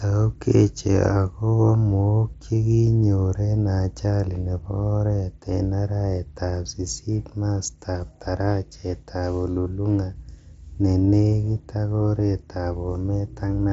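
Nothing stood out on listening to this speech, which comes through a Bluetooth mSBC headset link with its top end stopping at about 7.7 kHz.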